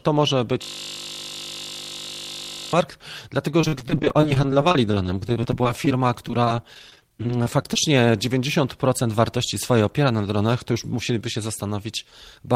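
From 0.62 to 2.73 s the speech gives way to a system hang loop: the machine or its audio driver stalled while the hardware kept replaying one 20 ms slice of its buffer, about 105 times. Because the loop is so short, it sounds like a steady 50 Hz buzz rather than a stutter. Nothing changes from cycle to cycle, which sets it apart from packet loss, where fresh audio keeps breaking through.

From 3.49 to 7.76 s comes repeated packet loss, heard as choppy, robotic speech. Data kept arriving late or not at all, and each hole was patched by stretching the preceding sound. There are dozens of short gaps, none longer than 45 ms, and the patching covers about 18% of the stretch. Unlike the hang loop, the speech still moves forward, but it is fractured rather than frozen into one repeating tone.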